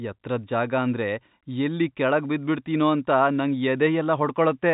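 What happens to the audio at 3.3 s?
Nothing goes wrong at 3.3 s; the speech carries on intact through that moment, with the narrow, telephone-like band of G.711 coding that tops out around 3.8 kHz.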